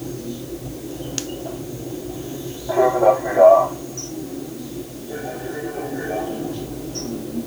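Low bit depth with dither runs throughout this recording of sounds. The audio is held to 8 bits, and noise added before rounding turns the quantisation error into a steady, even hiss rather than distortion, sitting only around 20 dB below the sound itself.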